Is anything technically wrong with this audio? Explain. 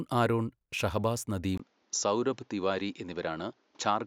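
Yes. From 1.58 s to the end of the speech, the sound turns duller, with nothing above 7.3 kHz. A gap of about 20 ms marks the switch, and a faint new background noise appears while the level stays steady. This is likely an input switched to a poorer device, not a filter.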